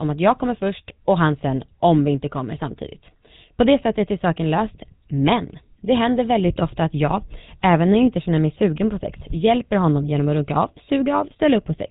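Speech run through the GSM full-rate codec from start to finish. The damage is plainly audible. Nothing above 4 kHz survives, so the top end is gone. A buzzy, gravelly roughness sits on the voice throughout. That fits a 13 kbps encoding.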